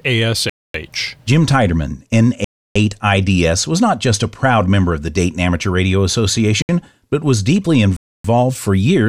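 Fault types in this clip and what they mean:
Block of digital silence: the speech drops abruptly to silence four times. Gaps of roughly 250, 310 and 280 ms are audible holes. A 68 ms gap just before "but was deeply" is a short hole. The output buffer was likely left unfilled.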